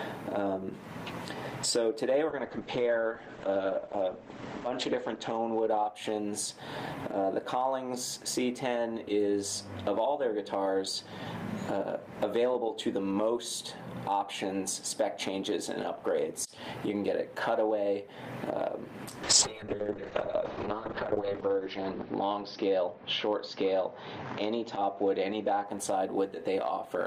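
Call bitrate drop from 2.29 to 6.67 s and again from 19.24 to 25.72 s: the encoder got far fewer bits, coding coarsely and narrowing the band from 20 kHz to 8 kHz, then 6 kHz, consistent with 48 kbps falling to 12 and 9 kbps, before clearing.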